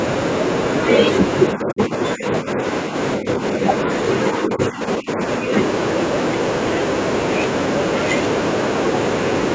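The speech is pulled down in five stretches, at 1.54–2.25, 2.41–2.59, 2.84–2.95, 3.17–3.63 and 4.41–5.2 s, by up to about 15 dB. This is speech suppressed in double talk, likely an echo canceller turning down the talker while the far end spoke. Unlike packet loss, the level sinks rather than snapping to silence.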